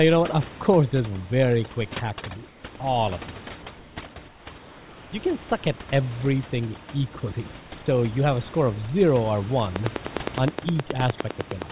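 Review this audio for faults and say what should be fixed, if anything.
Throughout, the speech sits over a lowered background with twinkling specks: overdone noise removal, where the suppressor cuts whole bands near its noise estimate and takes quiet speech with them. Lower the reduction strength and keep a residual noise floor.

At 2.48–2.64 s, 4.28–4.46 s, 4.58–5.12 s and 7.60–7.72 s the room tone turns flat and featureless, about 2 to 5 dB quieter: comfort noise in place of the background, likely from discontinuous transmission filling pauses with synthetic noise. Disable DTX, or send the real background during pauses.

From 9.76 s to the end, steady ticking repeats at a regular 9.7 clicks per second, peaking well above the speech: a train of clicks, likely interference or a faulty connection injecting pulses. Shield cables and check the audio interface and its grounding.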